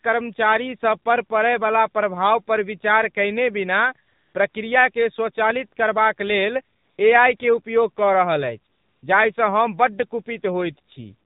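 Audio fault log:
Throughout: AMR narrowband mobile codec. The speech is band-limited with nothing above 4 kHz, giving the narrow telephone quality of 8 kHz sampling. The codec damage is plainly audible. The voice sounds buzzy and synthetic because a vocal-tract filter driven by a sparse set of pulses is rebuilding it from very few bits. That degree of coarseness fits one of the lower AMR-NB modes, around 7.4 kbps.
4.08–4.34 s, 4.50–4.54 s, 6.76–6.98 s, 7.38–7.40 s, 8.74–9.02 s: AMR comfort noise. In these gaps the real background drops out and a smooth, steady synthetic hiss takes its place, switching in and out at the edges. The gaps run from 20 ms to 280 ms. The sender classed these moments as silence and stopped transmitting speech frames. The receiver then filled each pause with noise generated from a rough level and spectrum estimate, which is why it sounds detached from the surrounding sound.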